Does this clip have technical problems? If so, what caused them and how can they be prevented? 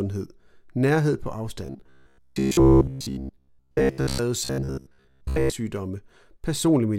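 Yes. Robotic sound from repeated short buffers appears from 1.66 to 4.19 s, right after "nærhed på", and again from 4.45 to 5.53 s. The speech turns into a rigid metallic buzz at 66.7 Hz while loosely following the words, with most of the real audio skipped. The likely cause is late-arriving audio, with the playback side looping the last buffer, which fits a buffer of about 15 ms. Prevention: enlarge the jitter or playback buffer and keep the audio thread from being starved.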